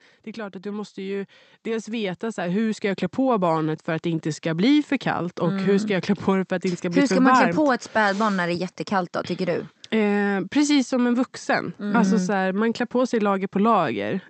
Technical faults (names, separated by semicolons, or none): automatic gain rising